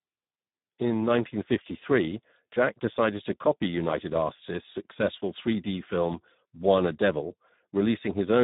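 Throughout, heavy Speex codec damage at a rate fitting roughly 8 kbps leaves the speech hoarse and buzzy; a spectrogram shows smeared harmonics and nothing above 3.8 kHz.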